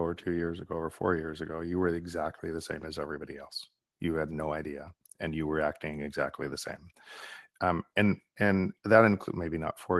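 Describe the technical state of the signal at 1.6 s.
At 1.6 s the speech is intact, with no dropout, glitch or distortion beyond the ordinary band-limited character of the call path it passes through.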